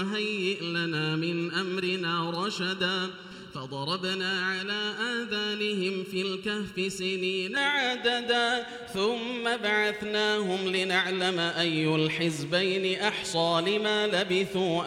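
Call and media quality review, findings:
Hollow, phasey sound from 0.0 to 7.57 s, then clears. Channel delay (comb filtering): one side lagging under a millisecond, summed to mono. Fixed notches from around 700 Hz up, roughly 1.4 kHz apart. Check the stereo-to-mono downmix.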